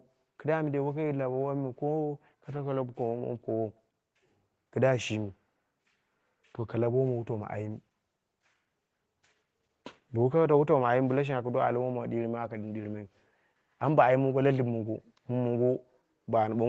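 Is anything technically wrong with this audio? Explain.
No, nothing is technically wrong.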